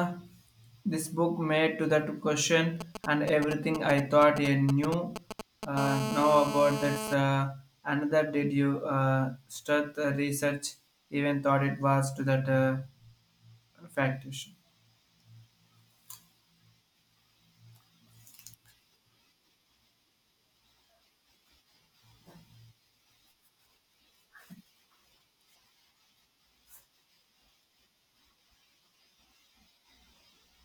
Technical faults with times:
2.81-5.65 GSM signalling bursts
5.77-7.14 GSM phone buzz

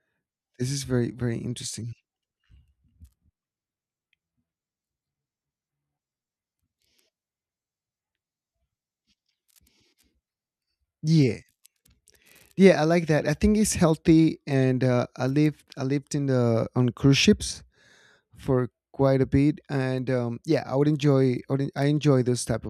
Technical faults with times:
none

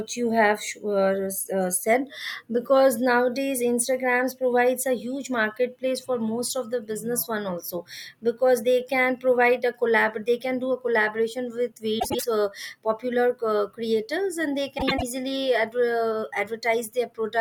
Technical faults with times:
11.99-12.24 frames out of order
14.78-15.03 frames out of order

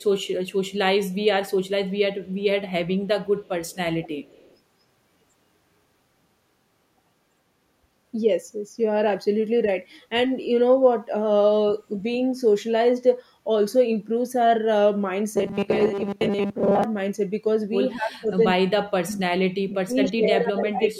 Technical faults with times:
0.00-0.52 echo leak
1.11-1.15 echo leak
2.25-2.34 echo leak
3.05-4.57 echo leak
15.36-16.84 robotic sound from repeated short buffers
17.96-19.28 speech suppressed in double talk
19.61-20.99 speech suppressed in double talk
20.04-20.10 echo leak

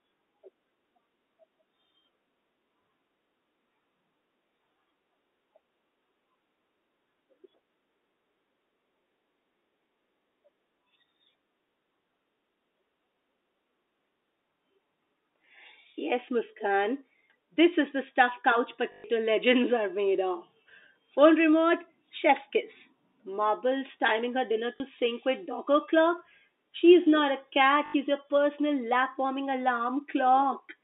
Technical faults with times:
18.92-19.04 packet loss with last packet repeated
24.76-24.80 packet loss with last packet repeated
27.86-27.94 packet loss with last packet repeated

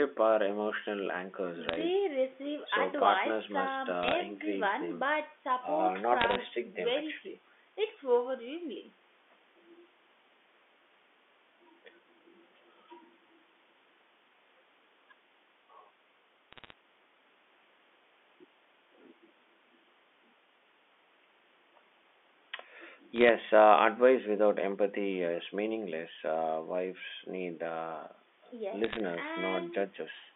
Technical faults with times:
1.69-1.81 bit errors on a digital phone line
4.03-4.14 bit errors on a digital phone line
6.20-6.35 bit errors on a digital phone line
16.53-16.73 bit errors on a digital phone line
23.16-23.29 bit errors on a digital phone line
28.84-29.00 bit errors on a digital phone line

